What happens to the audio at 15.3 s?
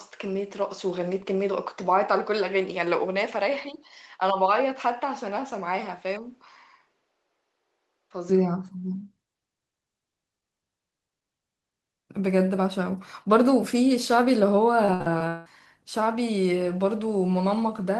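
At 15.3 s the speech is inside a stretch of repeated packet loss (robotic sound), 14.85 to 15.47 s. Five gaps, the longest 175 ms, were filled by extending earlier sound, so it turns choppy with pieces missing. A spectrogram shows smeared, repeating frames between breaks.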